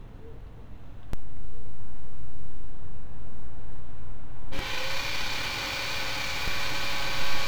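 DC steps at 1.13 s and 6.48 s shift the zero line by about -19 and -20 dBFS. Each thumps low. The first reverts at 4.59 s.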